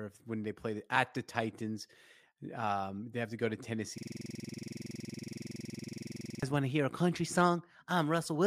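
From 3.98 s to 6.43 s the speech stops and a rapid, rigid stutter takes over, roughly 21.5 repeats per second, sitting between a buzz and a machine-gun rattle. It is a system hang loop. The computer or driver froze while the audio hardware kept replaying the same 46.44 ms slice of its ring buffer, which fits a 2048-sample buffer, about fifty identical passes before normal playback resumed.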